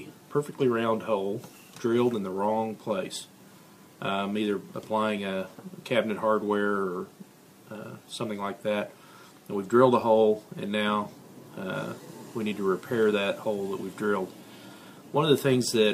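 Nothing in the recording stood out as a problem on listening.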